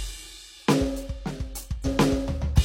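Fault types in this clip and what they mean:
Damaged data in a compressed stream: from 1.81 to 1.86 s the music briefly breaks up as the decoder misreads corrupted bytes and hunts for the next valid frame. The disruption lasts 50 ms.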